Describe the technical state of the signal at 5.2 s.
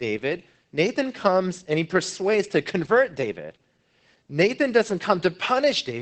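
At 5.2 s the speech is still under the Opus voice compression that runs through the whole clip. The codec is in its SILK linear-prediction mode at wideband, so nothing survives above about 8.6 kHz, and the coarsely coded excitation leaves the voice muffled, hoarse and faintly robotic, a plainly audible level of damage that fits a rate near 12 kbps. A simple low-pass filter would dull the top without adding that grainy, synthetic buzz. MP3-style swirling artefacts are absent too.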